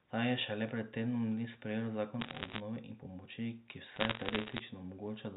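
Bit errors on a digital phone line crackle from 2.21 to 2.60 s, before "in pomoči ki", and from 3.96 to 4.60 s, after it. Flipped bits corrupt single samples. A hit on a high bit makes a sharp tick.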